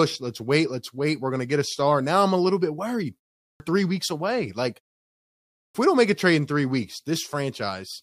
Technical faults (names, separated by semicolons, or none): clipped start after a pause